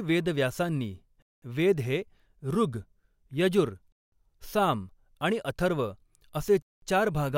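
At 1.22 to 1.42 s (before "वेद हे ऋग्"), 3.92 to 4.12 s (before "साम आणि") and 6.62 to 6.82 s, the speech stops dead for 200 ms: a gap between chunks, where 2.5 s blocks are joined with inserted silence. Waveform and spectrogram show flat, empty, hard-edged columns.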